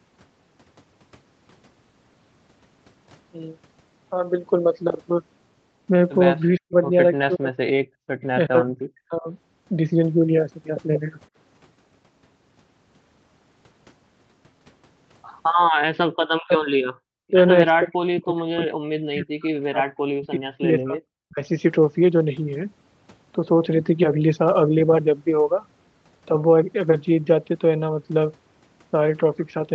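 From 6.58 to 6.76 s and 7.26 to 7.7 s the speech drops by roughly 40 dB. This is speech suppressed in double talk, likely an echo canceller mistaking the local talker for loudspeaker echo while both sides were speaking. At 7.98 to 8.19 s the background is gated by the echo canceller, which clamped the microphone down about 40 dB while the far end played. The room sound vanishes for about a fifth of a second, then returns. The same double-talk suppression recurs at 8.47 to 9.28 s, 16.14 to 16.67 s and 17.05 to 17.36 s, then for about three seconds across 17.79 to 21.41 s, where the speech repeatedly cuts out or sinks to a faint remnant.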